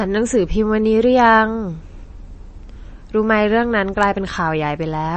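Speech, with MP3 compression damage audible for the whole clip. Nothing is present above about 8.4 kHz, a hard treble ceiling that dulls sibilants and removes air. The artefacts are plainly audible, with a watery texture where weak frequency components drop in and out between frames. A ceiling that low points to an encoder that ran short of bits and discarded the top band, which fits a low bitrate, likely around 32 kbps.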